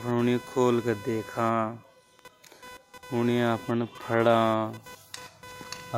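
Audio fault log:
Throughout: computer activity noise, a scratchy, chirping buzz sitting roughly 20 dB under the speech, with pulses repeating somewhere around 500 times a second. It's what you get when the machine's processor or graphics load keeps shifting and drags the audio circuit's shared ground around with it, so the noise tracks what the computer is busy doing rather than anything in the speech, flickering in its own rhythm.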